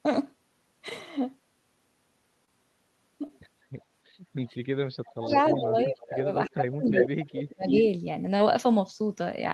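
A speech recording with three distinct faults. Short concealed packet loss occurs at 2.45–2.49 s, 3.27–3.31 s and 8.37–8.41 s. About 20 ms of audio goes missing each time and is bridged by continuing the preceding sound, giving a brief smear or wobble rather than the clean silent gap of a true dropout. Speech suppressed in double talk follows at 4.99–5.31 s, 5.53–6.28 s and 6.48–7.69 s. The voice is pushed down by up to about 40 dB, 25 dB and 35 dB respectively, most likely because an echo canceller turned the talker down while both sides spoke. Echo leak appears at 5.31–5.36 s, 5.78–5.84 s, 6.90–7.05 s and 7.69–7.84 s as delayed scraps ranging from well below the speech to about as loud. A consistent lag of about 320 ms separates this from room reverberation, which would trail off smoothly instead.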